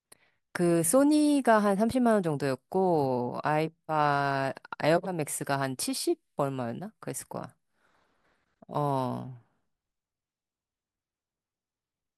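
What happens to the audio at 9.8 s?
At 9.8 s the audio is intact, with no dropout, click, distortion or other fault to be heard.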